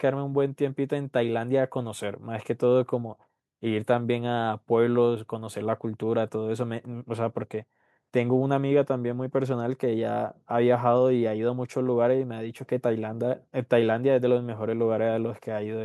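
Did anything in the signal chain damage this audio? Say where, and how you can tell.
No, nothing along the way seems to have harmed this speech recording, and there's nothing to point to at any stage.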